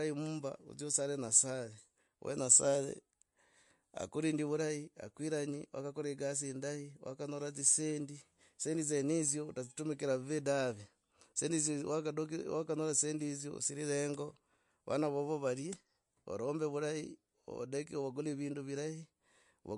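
From start to finish the speech has a hard ceiling at 11.2 kHz and a watery, swirly texture, with s sounds turning metallic. That's likely MP3 compression at a low bitrate, consistent with around 48 kbps, where the encoder drops the treble and flickers weak detail in and out.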